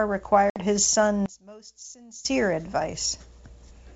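At 0.50 to 0.60 s the speech drops into a hard-edged silent gap, about 60 ms of audio, or a few packets, lost on an ADPCM call. Unlike plain dropout, the return is wrong: the decoder's predictor and step size have drifted from the sender's, so the speech comes back slightly distorted before settling.

From 1.26 to 2.25 s the speech falls by about 23 dB and turns faint, without the hollow, comb-like colouring of a delay between channels. The likely cause is one channel inverted: with one side's polarity reversed, the centred speech cancels in the mono sum, leaving only the faint inter-channel difference. The G.722 wideband coding around both faults keeps speech clear up to 7 kHz.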